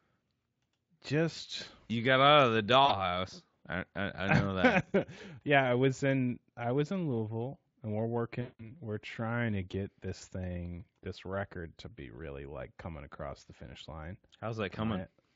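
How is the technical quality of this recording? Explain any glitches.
Two dropouts stand out, both VoIP packet loss concealed by the speech codec, on top of the mild hoarse edge you get from a Speex-style codec.

The first is a brief smear at 2.85 to 2.96 s, with about 40 ms missing. The second is a longer one at 8.41 to 8.72 s, where 180 ms went missing. In both, packets never arrived, so the decoder extrapolated from its last pitch and filter while lowering the gain. You hear the sound stretched into a buzzy tone or coloured noise that fades out, and the sound stays weak for a moment after the audio returns.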